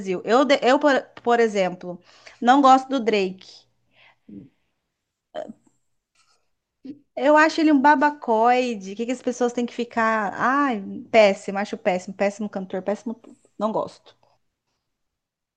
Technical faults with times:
none

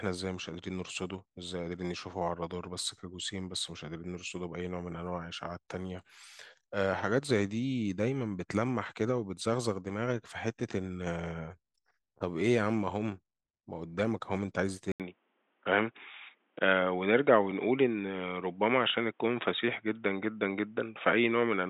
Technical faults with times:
14.92-21.70 input switched to a poorer device

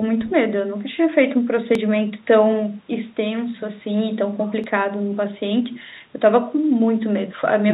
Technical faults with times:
1.75 dropped buffer (overrun)
4.64 dropped buffer (overrun)

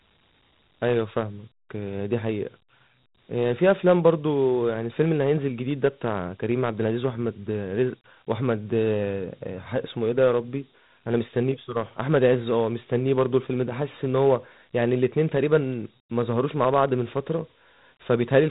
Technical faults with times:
0.00-18.50 Dialogic VOX ADPCM

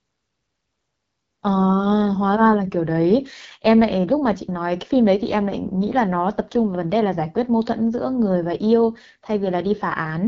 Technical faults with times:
0.00-10.27 AMR wideband (HD Voice) codec

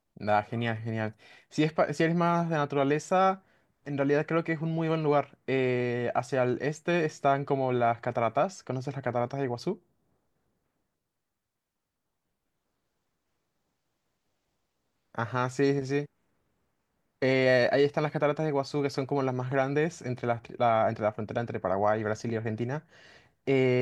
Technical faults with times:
none

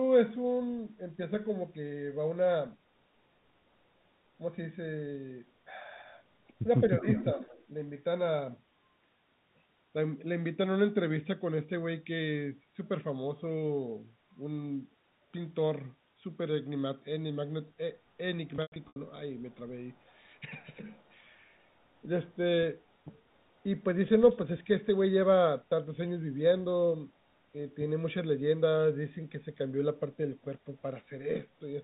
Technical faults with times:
7.00-7.04 speech suppressed in double talk
7.15-7.66 echo leak
18.56-18.96 packet loss with pitch repetition
19.96-20.40 echo leak
20.92-21.11 echo leak

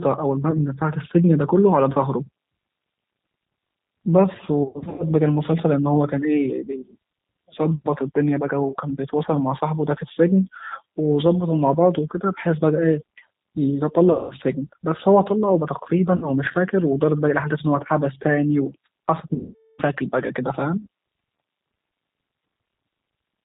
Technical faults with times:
0.00-23.44 G.729 codec
0.51-0.60 VoIP packet loss concealed by the speech codec
4.63-5.06 VoIP packet loss concealed by the speech codec
14.12-14.35 VoIP packet loss concealed by the speech codec
16.16-16.31 VoIP packet loss concealed by the speech codec
19.34-19.82 VoIP packet loss concealed by the speech codec

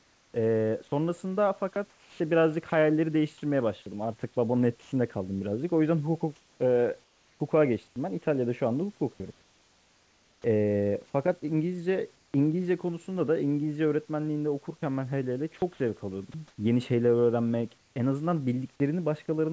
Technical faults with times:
0.00-19.52 channel delay (comb filtering)
0.00-0.34 comfort noise in place of the background
1.74-2.72 sound chopped by the voice detector
4.82-4.92 sound dropped by the voice detector
6.36-7.96 comfort noise in place of the background
9.32-10.44 comfort noise in place of the background
15.58-16.58 sound chopped by the voice detector
17.78-17.96 comfort noise in place of the background

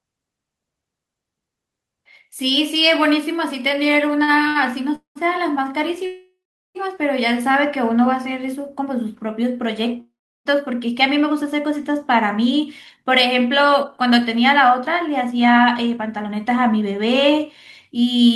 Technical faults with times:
4.23-4.57 short stall from a late packet
4.95-5.17 call audio freeze
6.06-6.77 call audio freeze
10.00-10.47 call audio freeze
14.68-18.30 jitter buffer speed-up

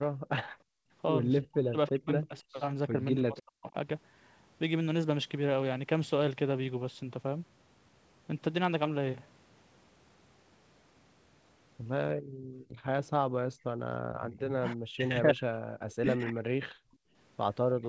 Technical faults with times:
0.02-0.07 echo leak
0.20-0.91 background gated by the echo canceller
1.48-3.74 speech suppressed in double talk
12.15-14.21 background gated by the echo canceller
14.54-17.89 speech suppressed in double talk
15.90-17.89 echo leak
16.79-17.15 background gated by the echo canceller

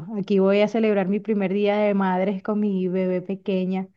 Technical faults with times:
none

